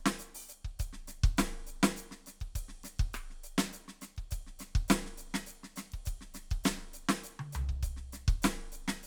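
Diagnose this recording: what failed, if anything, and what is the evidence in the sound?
Nothing failed; this music recording shows no faults.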